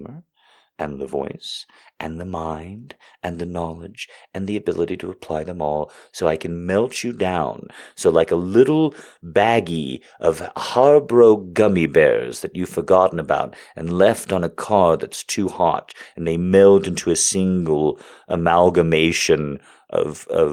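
No faults are audible in this speech clip; the only trace of processing is the light texture of low-rate voice coding, which fits Opus in hybrid mode at around 24 kbps.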